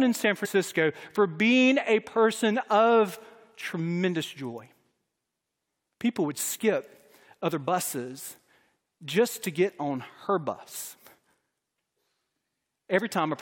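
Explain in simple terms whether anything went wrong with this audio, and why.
Twice the speech seems to hiccup forward: a short smeared blip where a sliver of sound goes missing, once at about 0.44 to 0.47 seconds and again at 7.66 seconds, right after "would skip other". This is compressed frames skipped. The file stores audio in blocks of 23.2 ms, and some blocks were never played. The first jump loses roughly 70 ms, which fits about three blocks, and the second about one. Overlapping blocks soften each join into a blur, not a click.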